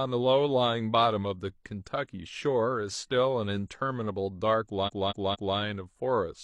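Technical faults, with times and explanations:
4.83 to 5.53 s, repeated frames: the speech stutters as one 232 ms slice plays three extra times. A block of compressed frames, which fits a run of five, was sent again and decoded anew, adding 0.7 s.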